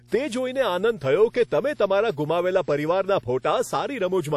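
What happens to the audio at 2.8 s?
At 2.8 s the speech carries two faults that run through the whole clip. Mains hum sits underneath as a steady low tone at 60 Hz, about 30 dB below the speech. Power-line current is leaking into the signal, likely through a ground loop or a nearby transformer.

The speech also sounds ringing and washy, with plainly audible codec damage. This fits WMA compression at a low bitrate, around 48 kbps. Quantisation noise smears across long transform blocks, a hiss breathes with the signal, and nothing remains above 18 kHz.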